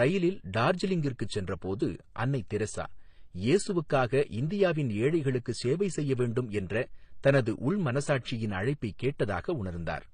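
Throughout the speech, nothing sounds above 9.7 kHz, and two sets of coding artefacts layer together, likely transcoding between lossy codecs, fitting MP3 then HE-AAC.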